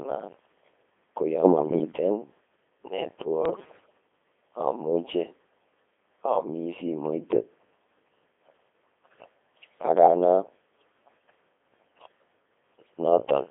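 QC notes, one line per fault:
Throughout: Codec 2 vocoder. The speech is robotic and buzzy, rebuilt from sine waves driven only by pitch, voicing, energy and spectral envelope at 2.4 kbit/s, with heavy damage and a band of about 250 Hz to 3.6 kHz. Unlike a waveform codec's smearing, the original waveform is simply gone.
1.43–1.92 s and 3.46–3.98 s: bit errors on digital voice radio. The first burst comes right after "ko yo". In both, the synthetic voice jumps in pitch, level and tone colour and breaks into bleeps and warbling gibberish. Flipped bits, roughly 4 to 5 percent, corrupt the parameters of whole frames rather than causing dropouts or clicks.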